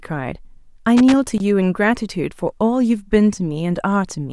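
Loose connector crackle from 0.97 to 1.40 s: a worn contact breaks and remakes the speech signal rapidly, giving an irregular burst of scratchy crackle.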